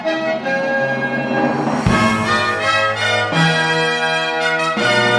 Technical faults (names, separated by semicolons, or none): wrong sample rate